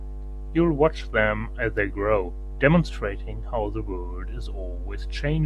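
No technical faults can be heard anywhere in the speech recording, and the signal stays intact and continuous throughout.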